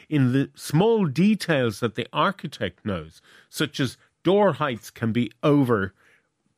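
No technical faults can be heard anywhere in the recording; the speech signal stays continuous and steady throughout, with no breaks, distortion or other disturbances.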